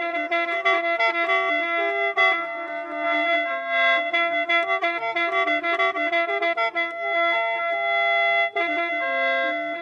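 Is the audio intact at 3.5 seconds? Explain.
Yes, at 3.5 seconds the audio is intact, with no dropout, glitch or other fault at that moment.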